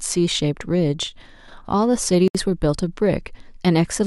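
At 2.28 s the speech just drops out for about 69 ms, then resumes where it left off: a gap at a join of encoded pieces. Separately encoded chunks were butted together untrimmed, so encoder delay and end padding left silence, edges smeared.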